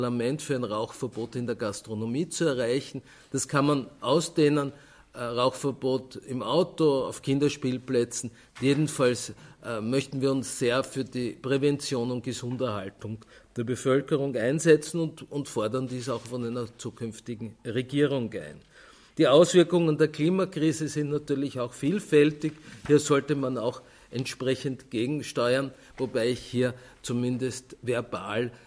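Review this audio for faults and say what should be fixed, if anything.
Nothing needs fixing, since no technical faults can be heard at any point in the audio.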